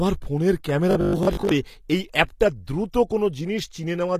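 Throughout, the speech carries plainly audible codec damage, with nothing above 14.9 kHz. The treble sounds rebuilt, which is likely HE-AAC compression, fitting about 24 kbps.

From 0.91 to 1.51 s, just before "এই অ্যাপটার দ্রুত", the speech turns into a rigid 50 Hz buzz. This is likely robotic sound from repeated short buffers, with 20 ms chunks making up about half the audio.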